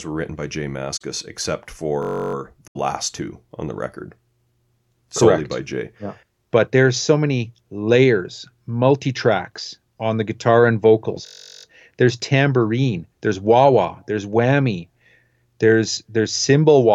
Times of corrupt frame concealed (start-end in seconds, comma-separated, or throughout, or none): 0.96-1.02, 2.68-2.80